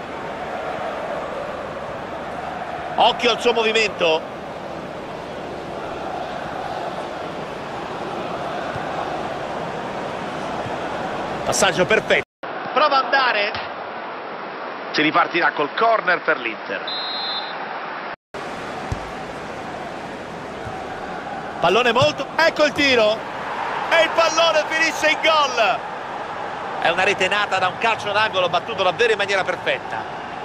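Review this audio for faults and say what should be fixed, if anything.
From 12.23 to 18.34 s, a 200 ms gap, then nothing above 5.6 kHz plus a new faint hiss a filter wouldn't add: likely an input switched to a poorer device. Lock the recording input so the system cannot change devices mid-take.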